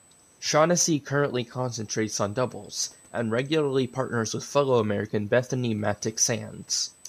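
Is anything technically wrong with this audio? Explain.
Yes. Throughout the speech there is USB whine: current drawn by the USB bus in 125-microsecond microframes leaks into the audio through the power or ground, adding a steady fixed-pitch whine at 8 kHz, strongest at its 16 kHz harmonic, around 25 dB below the speech.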